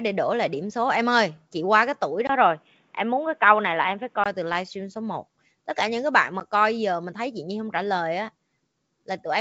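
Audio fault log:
2.27–4.26 s, input switched to a poorer device: after "chị qua cái tuổi", sound likely shifts to narrower-band gear, nothing above 3.8 kHz, 20 ms gap, faint new noise, until "từ livestream số".
6.40–6.42 s, packet loss on an ADPCM call: a 10 ms hard-edged hole after "cả những cái bạn"; the decoder's predictor and step size lose sync, briefly distorting "coi giờ mình thấy".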